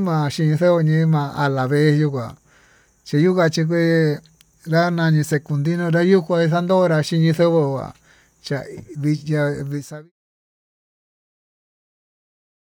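Nothing stood out on listening to this speech, and the level eases away smoothly in a fade-out that finishes at about 10.1 s.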